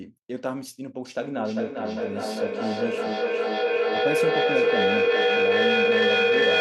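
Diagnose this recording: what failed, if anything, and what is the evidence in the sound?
Feedback howl at the call-processing stage: two devices sharing one room and one call formed an acoustic loop with gain above unity. From 1.05 s to the end, a tone near 500 Hz swells, pulsing roughly every 0.4 s, and peaks about 9 dB above the speech.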